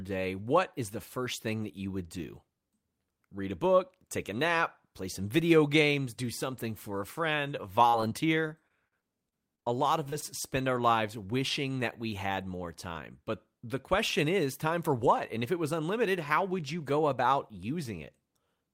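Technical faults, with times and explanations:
7.89–10.24 s, repeated packet loss (robotic sound): over these 2.3 seconds the audio breaks up into more than a dozen short dropouts, the longest about 44 ms. Each hole is covered by stretching the preceding sound, which accounts for roughly 290 ms of synthetic fill, about 12% of the span, while around 220 ms of the original speech never arrives. Because the patches recur in quick succession, the speech turns choppy, with pieces missing.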